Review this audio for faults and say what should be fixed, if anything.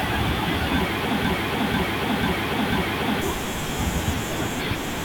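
From 1.25 s to 3.22 s the speech turns into a broken-record loop: a fragment about 0.49 s long plays four times in a row, identically, and whatever should have been heard in those two seconds is gone. The likely cause is a stalled player or stream that kept re-sending the last block it held. On a waveform or spectrogram this shows as four identical tiles butting edge to edge. Prevent it with stall detection that inserts silence rather than repeating buffered audio.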